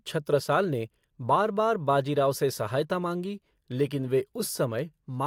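From 0 to 3.68 s, a resampler restarted on every block, likely in a 44.1 kHz to 48 kHz conversion, so each 20 ms block's edges were computed without their true neighbours. The errors repeat as a 50 Hz buzz under the speech, ending before "लेकिन वे".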